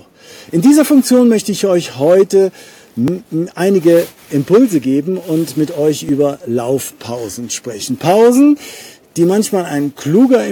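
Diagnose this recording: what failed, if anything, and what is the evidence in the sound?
A small jump in the sound at 3.08 s and again at 6.09 s, skipping about 15 ms and 5 ms, points to a driver or buffer stage, likely a dropped buffer (overrun).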